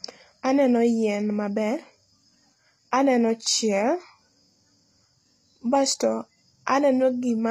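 Throughout the speech, the treble sounds synthetic. Sibilants come out gritty and lispy, and nothing reaches above about 14.9 kHz. This likely comes from HE-AAC compression at a low bitrate near 24 kbps. The upper band is rebuilt from copied lower bands, so its harmonics misalign.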